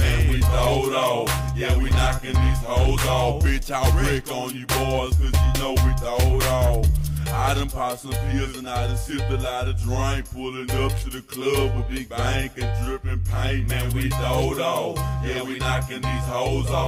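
The signal holds steady throughout, with no technical faults to be heard anywhere in the recording.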